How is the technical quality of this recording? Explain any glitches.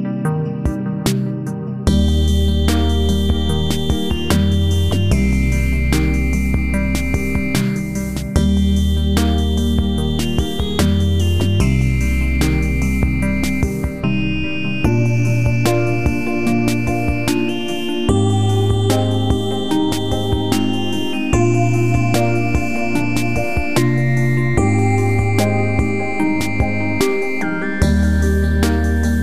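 Nothing jumps out here; I listened the whole way and didn't catch a single glitch worth pointing to.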